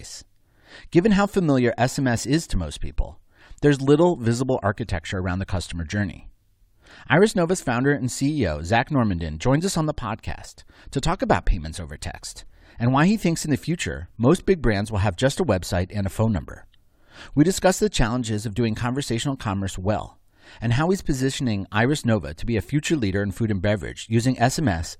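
No technical faults are audible.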